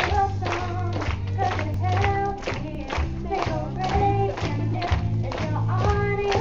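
At 1.74 s and again at 2.75 s there is an overlap between stream segments. The timestamps of adjacent one-second segments overlap, so the player discards a few milliseconds of audio that was never duplicated. Each splice causes a brief click or tiny skip, one second apart. On the waveform, each shows as an abrupt step where the signal jumps discontinuously. On a spectrogram, each is a thin vertical broadband line.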